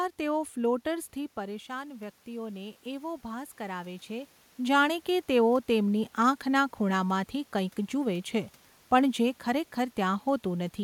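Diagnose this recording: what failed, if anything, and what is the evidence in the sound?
Call processing: automatic gain rising, 0.88–4.37 s. Input fell about 10 dB; gain climbs about 6 dB, so waveform and spectrogram background swell together.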